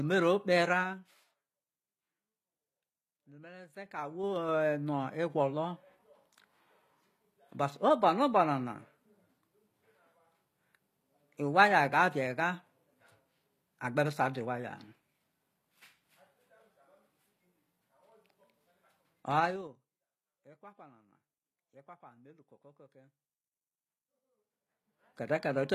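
Throughout the speech, the treble has a synthetic, gritty quality and s sounds come out lispy and metallic. This codec damage is plainly audible and is likely HE-AAC compression at a low bitrate, which fits something around 24 kbps. The upper band is rebuilt from copied lower bands, so its harmonics don't line up with those below. On a spectrogram, the top region looks smeared and repeated, and nothing appears above 14.9 kHz.

Zipper noise occurs four times. Each time, the level moves in audible 3 dB jumps with no smoothing, and every jump adds a small click. From 0.68 to 1.37 s, the level drops about 20 dB at roughly ten steps per second. From 3.67 to 4.52 s, it rises about 20 dB at roughly seven per second. From 19.37 to 19.80 s, it falls about 25 dB at roughly twenty per second, which sounds like a fast zip. From 24.15 to 25.34 s, it climbs about 25 dB at roughly seven per second, which sounds like a slower ticking. 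On the waveform, the envelope forms a staircase during these spans. On a spectrogram, each step shows as a thin vertical broadband line.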